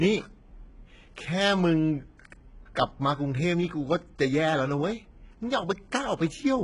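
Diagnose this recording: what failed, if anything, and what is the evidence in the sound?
The failure is at the codec stage, most likely HE-AAC compression. Throughout the speech the treble is bright but synthetic. S sounds come out gritty and lispy, and nothing extends above 11 kHz. The heavy damage fits a bitrate around 12 kbps, with upper bands copied from lower ones.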